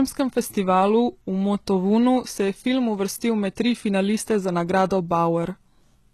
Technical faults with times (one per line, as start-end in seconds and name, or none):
0.00-6.13 HE-AAC compression